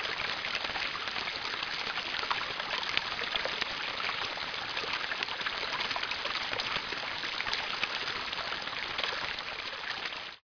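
A recording of everyday sounds with aliasing throughout: content above 5.5 kHz folds back as gritty, unrelated tones nearly as loud as the source, which fits an unfiltered reduction from 44.1 kHz to about 11 kHz.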